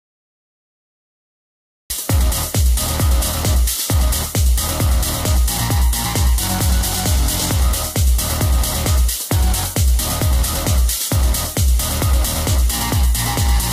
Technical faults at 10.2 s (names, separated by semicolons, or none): none